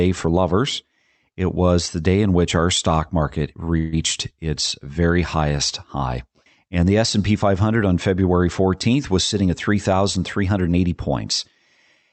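At 3.77 s the speech stalls for about 0.17 s in a call audio freeze. The likely cause is packets held up in transit until the jitter buffer ran empty. The receiver bridged roughly 150 ms by extending the last sound into a short fading buzz or hiss rather than dropping to silence. When the packets arrived, playback resumed where it had stopped, so no speech is lost, but everything after this point runs about 150 ms later.

From 9.16 s to 10.81 s there is a jitter buffer speed-up. The buffer had accumulated more audio than its target, most plausibly the delay left by the earlier stall. To bring it back down, the receiver repeatedly cut out short pitch-period-length slices, removing about 150 ms in total. The speech plays at about 108% of normal speed with the pitch unchanged, so this stretch sounds slightly hurried.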